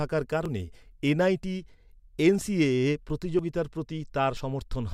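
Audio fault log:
0.46, 1.43, 2.41, 3.39, 4.37 s: audio missing between chunks. Brief skips recur almost exactly once per second, likely where short slices are lost at processing handovers. The edges are butted together, so there is no silent gap as in a dropout.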